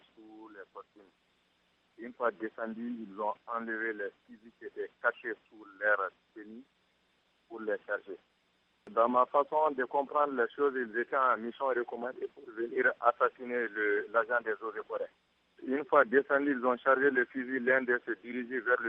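No technical faults can be heard anywhere in this audio.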